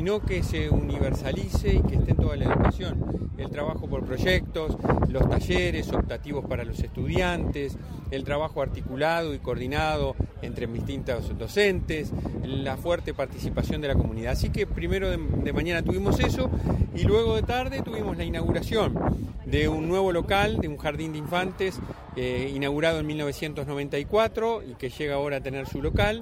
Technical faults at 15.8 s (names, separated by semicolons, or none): none